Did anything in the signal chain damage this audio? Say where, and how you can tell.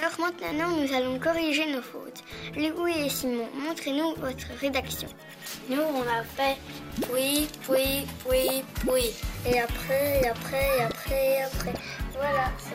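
Yes. From 6.95 to 11.64 s, pre-emphasis was left on at playback: the treble sits about 8 dB high at 10 kHz against 1 kHz, matching an uncorrected CD 50/15 µs curve.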